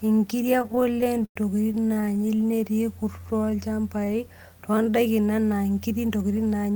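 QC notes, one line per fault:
0.59–2.62 s, repeated stalls (stutter): packets kept arriving late, so the jitter buffer ran dry 39 times and the receiver stretched the last sound to bridge each wait, the longest about 103 ms. Nothing is lost, but roughly a quarter of this stretch (482 ms) is filler, so the speech drags and stutters.
3.03–4.18 s, jitter buffer slow-down: with the buffer running short, the receiver repeated single pitch periods and bits of pauses to build a reserve, adding 150 ms. The speech plays at 88% speed with unchanged pitch, so sounds are drawn out.
6.09–6.70 s, jitter buffer speed-up: just after "enaa nkiri" the buffer held more audio than its target, so the receiver trimmed short pitch-period pieces, some 70 ms in total, to cut the delay. The speech runs at 112% speed at the same pitch and sounds hurried.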